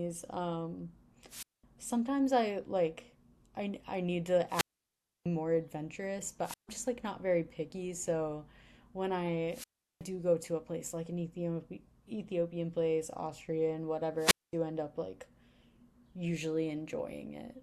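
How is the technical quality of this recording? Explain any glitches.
The speech is broken by five wireless microphone squelch dropouts, at 1.29 to 1.64 s, 4.48 to 5.26 s, 6.44 to 6.69 s, 9.49 to 10.04 s, and 14.18 to 14.53 s. Each time, the radio link from an analogue FM microphone weakens. Hiss swells, then the receiver's squelch shuts the output off. The silent holes last about 0.21, 0.65, 0.15, 0.37 and 0.22 s. The voice then comes back.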